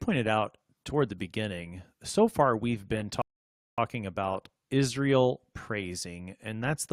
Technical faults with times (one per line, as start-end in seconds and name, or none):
3.22-3.78 rebuffering stall